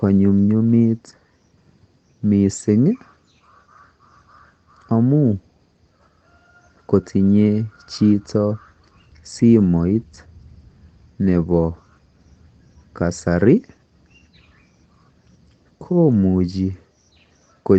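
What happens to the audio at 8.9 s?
Nothing goes wrong at 8.9 s: the speech there is intact, with no dropout, click or other fault.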